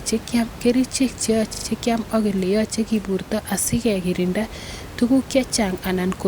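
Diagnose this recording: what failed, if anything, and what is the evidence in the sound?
Repeated frames at the codec or storage stage: from 1.53 to 1.65 s, just before "kiam ak", a 40 ms block plays three extra times, giving a stutter. Duplicated compressed frames were decoded again, adding 120 ms, with room noise audible underneath.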